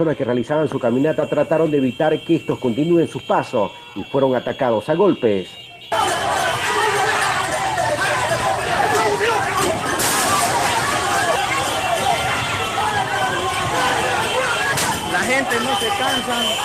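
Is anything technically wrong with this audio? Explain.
No, nothing technically wrong can be heard here.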